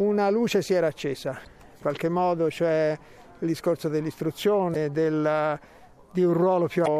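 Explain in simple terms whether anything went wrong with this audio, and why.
Three short glitches break into the audio: brief disruptions lasting about four hundredths of a second each, at 1.43 to 1.47 s, 4.72 to 4.76 s, and 6.83 to 6.88 s. The cause is damaged data in a compressed stream. At those spots some of the stored data was lost or scrambled. The player couldn't read those pieces properly, so it produced a glitch until it found its place again and carried on.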